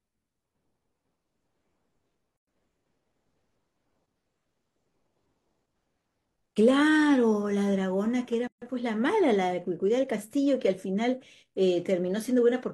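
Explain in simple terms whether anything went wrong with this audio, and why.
Gaps at joins of encoded pieces appear at 2.37 to 2.47 s and again at 8.47 to 8.62 s. The speech stops dead for about 0.11 s and then 0.14 s, with blurred edges, and resumes where it left off. The two joins fall 6 s apart, which suggests the audio was encoded in separate chunks and stitched together. Each chunk kept the encoder's short silence at its start and the padding at its end, leaving these holes.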